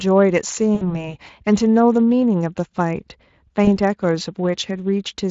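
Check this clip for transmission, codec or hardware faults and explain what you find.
Two faults stand out in this speech. Throughout, the speech sounds hoarse and noisy, plainly Speex codec damage: a CELP coder short of excitation bits, at a rate that points to roughly 20 kbps.

At 0.75 to 1.11 s and 3.65 to 3.69 s, the speech smears into a fading buzzy or noisy sound. This is VoIP packet loss concealed by the speech codec. The decoder extrapolates its last pitch and filter across 60 ms and 20 ms gaps, and the speech stays weak after packets return.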